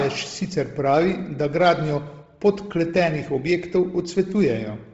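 From start to finish the speech sits in a band that stops at about 7.8 kHz, and the upper part of that band has a breathy, grainy texture rather than clean detail. This is likely Bluetooth LC3 compression: at a low rate, which fits around 24 kbps with short 7.5 ms frames, the codec discards much of the high spectrum and fills the gaps with noise, so consonants and sibilance come through as a coarse hiss.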